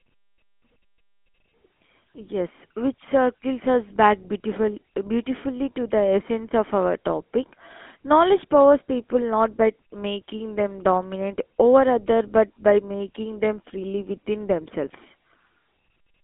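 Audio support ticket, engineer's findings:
GSM full-rate codec in the speech path, whole clip. Band limited to 200 Hz–3.5 kHz. Vocal-tract model driven by sparse, regularly spaced pulse excitation gives a plainly audible buzzy, gravelly roughness. Consistent with a 13 kbps GSM full-rate link.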